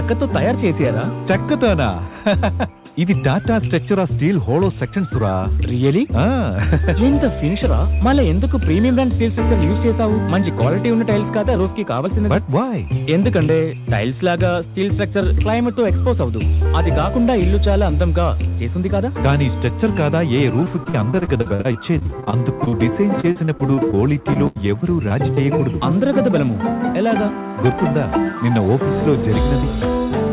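From 20.64 to 25.38 s, repeated packet loss turns the sound choppy and robotic: dozens of short holes, the longest about 82 ms, are patched by stretching the previous sound.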